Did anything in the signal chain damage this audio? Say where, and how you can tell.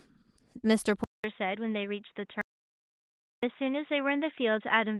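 Yes. At 1.04 s the sound stops for about 200 ms and then comes back dull and boxy. From there to the end, nothing reaches above 3.8 kHz, the level sits roughly 5 dB lower, and a faint new noise floor sits far below the signal. This is most likely an input switched to a poorer device at the capture or driver stage, such as a fallback microphone or a headset call profile with its own narrow band, tone and noise.

From 2.41 s to 3.43 s, about 1.01 s, the audio drops to silence with no room tone at all. It then resumes mid-flow, so whatever was said in that gap is lost. That silence marks an audio dropout to silence in the capture path. The likely cause is a disconnected device, a failed link or a brief mute, while the recorder kept writing empty samples.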